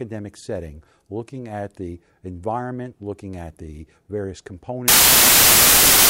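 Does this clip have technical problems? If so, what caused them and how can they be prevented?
Yes. Samples built from the wrong bytes, from 4.88 s to the end at 6.09 s, right after "looking at the various": the reader assembles each sample from misaligned or swapped bytes, so the rapidly changing low bits dominate and the speech turns into loud, harsh noise, close to white on the louder sounds. Prevent it by declaring and checking byte order, sample width and frame alignment at every decode and format-conversion step.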